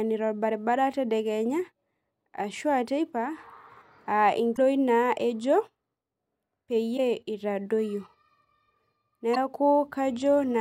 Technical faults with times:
4.53-4.59 damaged data in a compressed stream
6.94-6.99 damaged data in a compressed stream
9.31-9.37 damaged data in a compressed stream

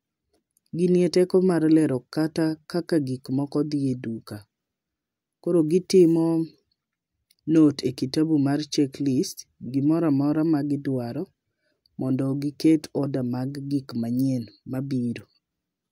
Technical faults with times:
none

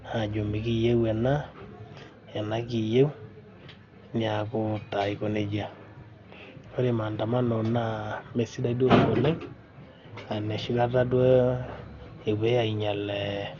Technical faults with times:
0.00-13.59 Dolby Digital compression

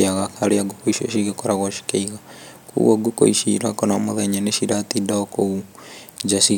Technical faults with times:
none

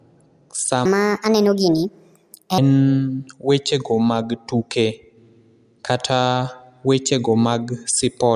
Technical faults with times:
0.85-2.58 wrong sample rate

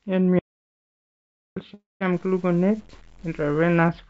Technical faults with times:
0.39-1.56 audio dropout to silence
1.74-2.02 call audio freeze
2.13-3.89 low bit depth without dither

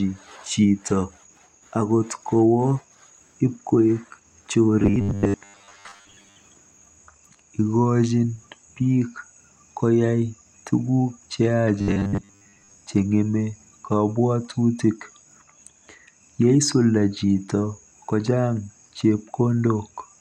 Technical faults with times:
4.80-6.36 robotic sound from repeated short buffers
11.79-12.79 robotic sound from repeated short buffers

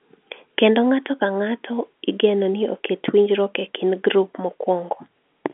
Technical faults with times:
none

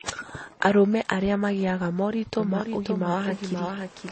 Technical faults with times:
0.00-4.12 transcoding between lossy codecs
2.40-4.12 doubled audio track

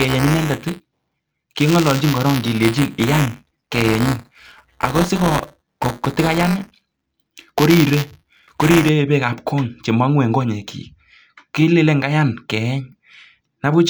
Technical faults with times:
0.00-8.89 buffer tearing

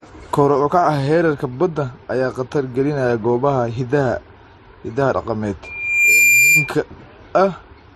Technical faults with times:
0.00-7.96 transcoding between lossy codecs
5.64-6.73 loudspeaker feedback squeal

